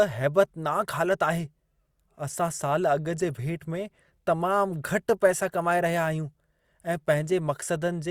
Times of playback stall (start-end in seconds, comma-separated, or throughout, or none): none